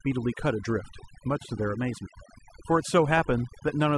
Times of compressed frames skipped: none

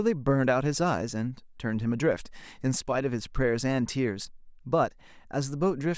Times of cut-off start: none

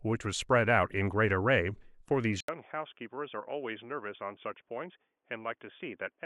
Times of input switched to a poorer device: 2.40-6.25

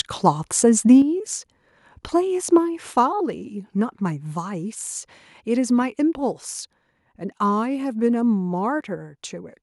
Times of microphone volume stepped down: 1.02, 2.58, 5.82

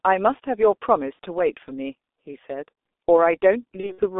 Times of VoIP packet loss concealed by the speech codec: 1.13-1.18, 3.80-4.05

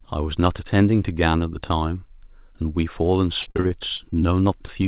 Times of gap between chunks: none

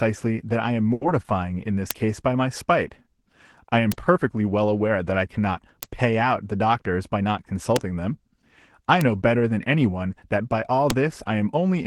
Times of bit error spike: 1.91, 3.92, 5.83, 7.76, 9.01, 10.90

